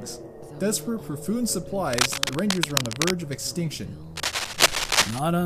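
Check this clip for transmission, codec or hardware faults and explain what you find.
There is one hardware-type fault, cable scratch noise, heard twice: from 1.93 to 3.12 s, and from 4.16 to 5.19 s. Both times, a dense, irregular crackle and rustle sits over the audio. The first burst is roughly as loud as the sound itself, and the second is somewhat louder than the sound. The likely cause is a worn cable, connector or control being disturbed, so that its contact resistance jumps erratically.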